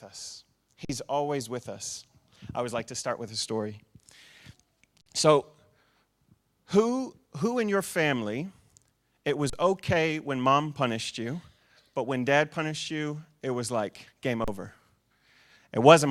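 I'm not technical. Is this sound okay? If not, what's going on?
No. The speech briefly freezes four times, an underrun with held sample: playback ran dry, the output held its last level, then jumped ahead. This happens at 0.85 s (about 46 ms, before "always with us I"), 5.02 s (46 ms), 9.50 s (35 ms, before "okay when mom punished") and 14.44 s (35 ms, after "it was like game").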